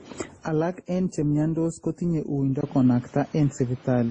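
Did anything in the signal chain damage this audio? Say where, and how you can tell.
Yes. Transcoding between lossy codecs affects the whole clip at the codec stage. Nothing survives above 9.7 kHz, and several distinct artefact textures are heard stacked together. That fits a low-rate MP3, likely re-encoded through Opus and then WMA, with each pass adding fresh damage.

Input switched to a poorer device at 2.61 s, just after "en chemyontos kotinye uindo". This happened at the capture stage. A 20 ms gap marks the switch. Then the band narrows to 7.6 kHz, the level shifts about 5 dB, and new noise appears about 30 dB down, likely from another microphone taking over.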